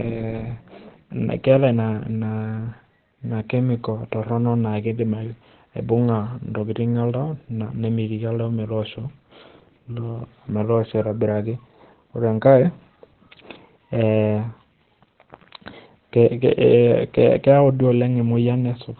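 The audio was likely squeezed through Opus compression at a very low rate, where the encoder drops into its speech-oriented SILK mode and keeps only a narrow band. Across the whole clip nothing is left above 4.2 kHz, so the speech sounds muffled and telephone-like, and the heavy coding damage adds a hoarse, rough texture. That combination fits a narrowband setting at around 12 kbps.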